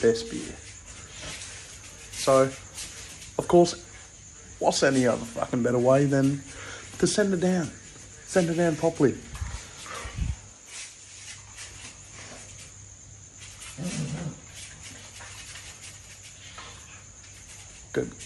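No audible faults anywhere in the clip.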